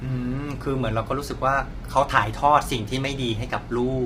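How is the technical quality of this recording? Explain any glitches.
The speech is noticeably degraded from start to finish by heavy low-delay AAC compression. The voice sounds rough and grainy, with a hiss filling the gaps between harmonics and a dull, artificial top end. The likely cause is AAC-ELD coding at a low rate, consistent with about 24 kbps, whose short frames resolve pitch harmonics poorly and leave too few bits for a clean spectrum.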